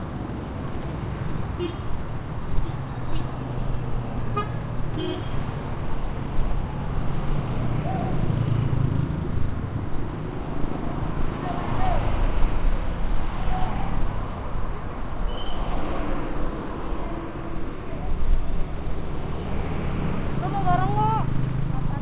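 No technical faults occur at any point in the sound; it has simply come through a WebRTC call path whose narrowband coding, consistent with G.711 mu-law, leaves nothing above 4 kHz.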